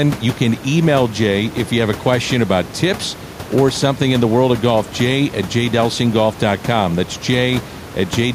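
No technical faults are audible in the speech, and the room noise beneath it, sitting about 13 dB and about 35 dB below the voice, belongs to the recording space rather than to the system.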